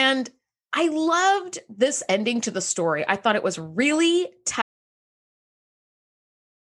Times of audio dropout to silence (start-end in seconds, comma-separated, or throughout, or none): 4.62-6.75